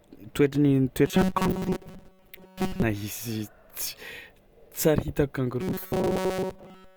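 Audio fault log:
1.06–2.82 s and 5.61–6.96 s: robotic sound from repeated short buffers. The speech becomes a rigid metallic buzz at 188 Hz that loosely tracks the words. This is likely from roughly 5.3 ms chunks being replayed in place of fresh audio, with most of the real signal skipped.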